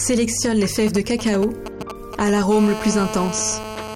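From 0.87 to 2.39 s a galloping dit-dit-dit of short buzzy bursts rides over the audio, roughly 10 dB below the wanted signal. These are GSM signalling bursts. A 2G phone close by is exchanging brief groups of radio transmissions with the network, and the audio circuitry rectifies that RF energy into short buzzes at the 217 Hz burst rate, heard in clusters rather than continuously. From 2.52 to 3.95 s the disturbance turns into a steady, hard, raspy GSM phone buzz at 217 Hz, rich in harmonics and bearing no relation to the underlying sound, at about 9 dB below the signal. It is steady because the phone is now on an active call and transmitting its time-slot bursts 217 times a second without a break. The same rectification turns that pulse train into a continuous buzz in the audio path.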